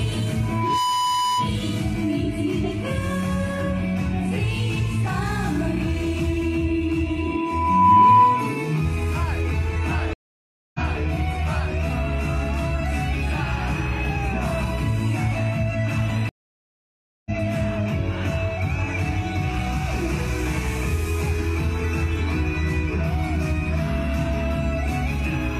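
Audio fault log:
0.43–1.57 s and 7.18–8.72 s, loudspeaker feedback squeal: a single 995 Hz tone swells over a fraction of a second as the mic-speaker loop runs away, reaching the sound's level and then roughly 10 dB above it. Unlike a steady interference whistle, it grows.
10.13–10.79 s and 16.29–17.31 s, stream reconnect: silences of 610 ms and 968 ms. Playback then restarts about half a second and about 0.7 s further on, so material is skipped rather than just muted as in a dropout.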